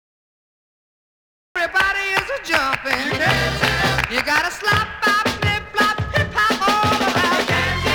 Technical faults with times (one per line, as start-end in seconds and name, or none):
0.00-1.56 cut-off start